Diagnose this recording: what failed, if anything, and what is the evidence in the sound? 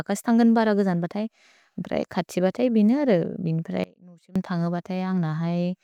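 The speech signal was likely broken at an intermittent analogue connection while the input after it stayed live. From 3.84 to 4.36 s there is an audio dropout to a faint residue. The speech cuts abruptly and leaves only a faint leak roughly 25 dB down, then returns mid-flow.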